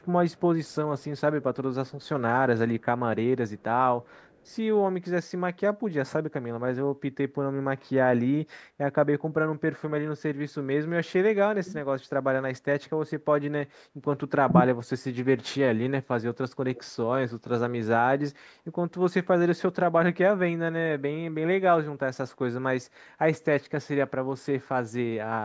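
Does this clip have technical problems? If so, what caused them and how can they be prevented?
Yes. There is echo leak at 0.01–0.06, 0.31–0.40, 0.66–0.75, 1.88–2.03 and 16.75–16.82 s. A faint copy of the speech comes back about 0.46 s late. It is very quiet, roughly 40 dB down, but louder at 16.75 s, nearer 25 dB down. The likely cause is a far-end loudspeaker whose echo canceller let part of the microphone pickup through. A headset or lower speaker volume at that end prevents it.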